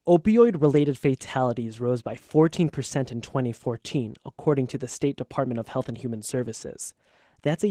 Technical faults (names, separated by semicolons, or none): Opus voice compression